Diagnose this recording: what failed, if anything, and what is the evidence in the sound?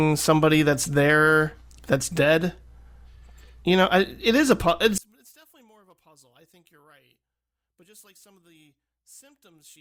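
At 4.98 s the speech collapses by about 34 dB and stays faint to the end at 9.80 s, leaving a faint residue. This is one channel inverted, likely from a polarity swap in the analogue wiring. When the two channels are summed to mono, the centred speech cancels and only their small differences survive. On the waveform, the amplitude drops abruptly to a sliver at 4.98 s. On the spectrogram, energy thins across the band.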